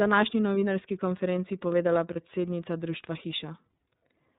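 A band-limited, slightly rough and synthetic quality runs through the whole recording, with nothing above 4 kHz and plainly audible coding damage on the speech. That is the iLBC codec at work. It codes each frame's excitation on its own, discarding the upper band and smoothing fine detail. The roughness and frame timing point to the 13.33 kbps mode with 30 ms frames.

From 2.13 to 2.17 s the speech gives way to a brief held, faintly buzzy vowel-like sound, and the same thing happens again, even more briefly, at 3.80 s. These are lost iLBC frames. In each case the decoder filled the gap by repeating the last pitch cycle blended with noise. The length of each patch fits a single missing 30 ms frame. Because iLBC frames decode independently, the speech snaps back cleanly right after each one.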